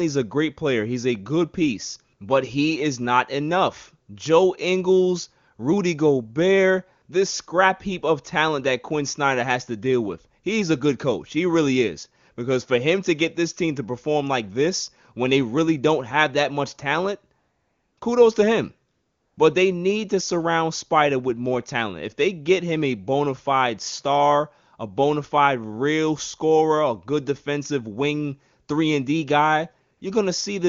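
AMR comfort noise replaces the real background four times: from 17.39 to 17.97 s after "have that much talent", again from 17.99 to 18.01 s just before "kudos to him", from 18.91 to 19.37 s after "kudos to him", and from 29.97 to 30.01 s. In each gap the phone judged the talker silent and stopped sending speech frames, so the receiver synthesised noise from a coarse level-and-spectrum description. It sounds like smooth, steady hiss switching in and out against clear AMR-WB speech at 23.85 kbit/s. On a spectrogram each gap shows as a uniform, featureless band with hard vertical edges, and on the waveform as a flat, even noise floor.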